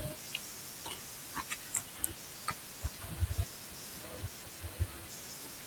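Speech recording with no audible technical faults.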